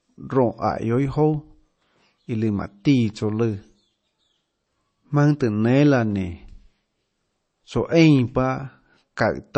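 From start to finish, the speech has nothing above about 8.3 kHz. The top octave is simply missing, so the sound is dull. The band that remains carries a smeared, swirly texture. This is low-bitrate audio saved at a high bitrate. The cut-off and artefacts likely come from an MP3 at around 32 kbit/s, later re-encoded at a high bitrate. The second pass keeps that damage but cannot restore what was lost.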